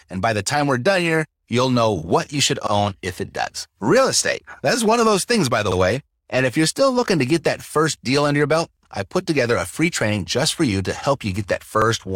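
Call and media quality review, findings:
Overlapping chunks: the 3.0 s processing chunks each start 50 ms before the previous one ends, so 50 ms of speech replays at the join. Audible stutter-click at 2.67 s (after "know what you should", before "if it does"), 5.72 s (after "those things by the") and 11.82 s (after "for you to help").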